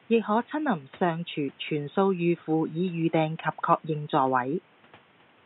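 The speech signal has no technical faults, with only the room's own background noise sitting about 32 dB below the voice as part of the recording.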